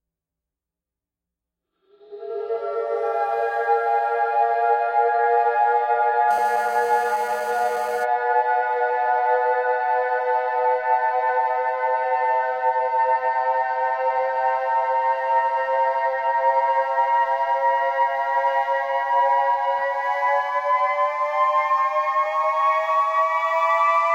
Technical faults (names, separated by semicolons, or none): GSM phone buzz